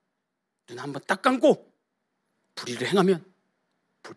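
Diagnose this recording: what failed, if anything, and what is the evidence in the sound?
Nothing failed in this recording, and the sound gives no evidence of any fault at any stage.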